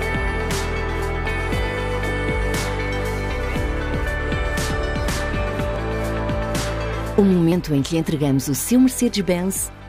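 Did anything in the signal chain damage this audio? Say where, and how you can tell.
Yes: a dropped buffer (overrun) at 0.5 s, 5.76 s and 7.52 s, most likely in the driver or buffer stage. Each is an abrupt forward jump in the sound with no gap of silence. The skips are roughly a couple of hundredths of a second at 0.5 s, several hundredths at 5.76 s and a few hundredths at 7.52 s. Capture fell behind, the hardware overwrote unread samples, and the surviving audio on either side was spliced together.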